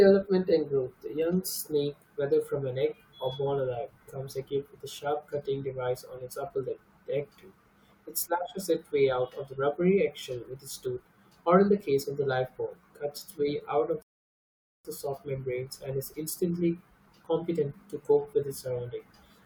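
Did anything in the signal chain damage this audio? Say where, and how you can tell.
Yes, at the playback stage: a rebuffering stall from 14.02 s to 14.85 s. The speech cuts to silence for about 0.82 s, then resumes exactly where it stopped, with nothing skipped. The player exhausted its downloaded audio and waited for more data, adding time rather than losing content.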